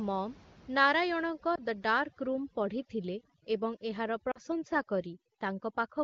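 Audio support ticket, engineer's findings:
Overdone noise removal from 1.29 s to the end. Background drops and breaks up into twinkling specks. Noise reducer set too hard, switching off bands near its noise estimate and taking quiet speech detail with them. Room noise sits about 26 dB below speech.

Lost AMR speech frames at 1.55 to 1.60 s and 4.31 to 4.39 s. First is a brief dip or warble, fitting one lost 20 ms frame. Second is longer, dropping to near silence, fitting two lost frames. The wideband decoder repeats the last pitch and vocal tract settings at falling gain.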